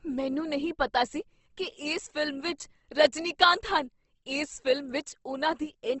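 Opus compression, throughout the clip: the speech carries a plainly audible grainy, rough texture, and nothing is present above 8.2 kHz, a wideband ceiling. The likely cause is Opus coding in its music mode at a rate that fits something near 16 kbps. With too few bits, the encoder keeps each band's energy but fills the detail with folded or noise-like content, so voiced sounds turn noisy and gritty rather than swirling.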